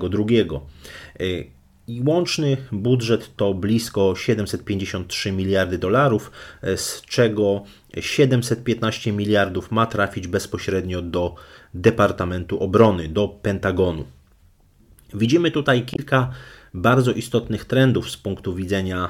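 At 15.94 to 15.99 s the speech breaks into a brief glitch lasting about 56 ms. This is damaged data in a compressed stream. Corrupted bytes made the decoder misread its frames and lose sync. It then skipped ahead to the next valid frame header.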